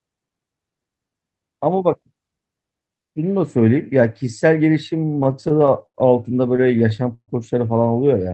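From 5.05 to 5.96 s and again from 6.56 to 7.30 s, repeated stalls (stutter) break up the speech. Packets arrived late, so the jitter buffer kept emptying and the receiver stretched the last sound to cover each wait. The waits reach 81 ms in the first span and 135 ms in the second. Nothing is lost, which sets this apart from dropouts: the speech drags and stutters rather than skipping. Throughout, the call codec limits the band to about 8 kHz.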